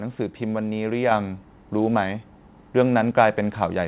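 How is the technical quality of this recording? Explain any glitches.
The recording has one glitch. The speech is band-limited with nothing above 4 kHz, which fits a narrowband telephone codec such as G.711 mu-law on the call path.

At 1.11 s the microphone volume steps up by about 5 dB in one jump. The call software raised the input volume, so voice and background noise get louder together. Because the background rises too, and instantly, it cannot be a talker moving closer or a gradual gain ramp.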